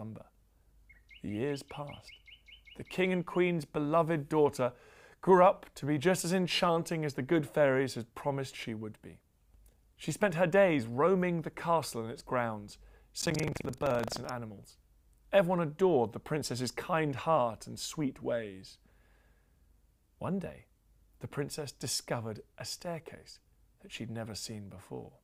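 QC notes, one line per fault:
13.18–14.32 s, buffer tearing: a rattly 23.4 Hz buzz, fitting a 2048-sample buffer, where a small slice of each period replays audio from a fraction of a second earlier.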